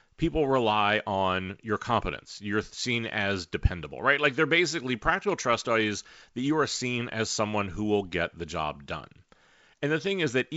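The speech has no technical fault; it has gone through G.722 wideband telephone coding at 64 kbit/s, the mode that gives its lower band the most bits, and its spectrum ends at 7.7 kHz as that wideband path allows.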